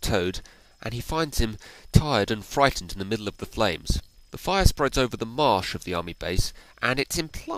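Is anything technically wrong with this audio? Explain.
No, nothing technically wrong can be heard in this audio. There is no fault to point to at any point in the clip.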